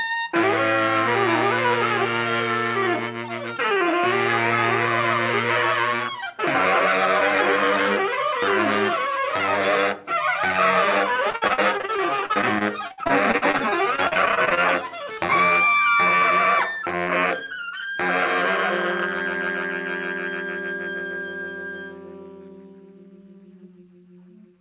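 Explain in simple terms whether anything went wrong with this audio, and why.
Between 11.3 and 14.6 s the sound turns choppy and robotic. This is repeated packet loss: pieces of audio kept failing to arrive in time, 32 times in quick succession. Each hole, the longest about 59 ms, was patched by stretching the last bit of sound. About a quarter of that stretch is filler, which gives the broken texture. The dull, phone-like tone, with nothing above 4 kHz, comes from the call connection itself.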